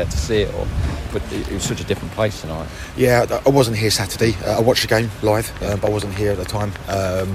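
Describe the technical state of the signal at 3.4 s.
At 3.4 s the signal is intact, with no audible fault at that point.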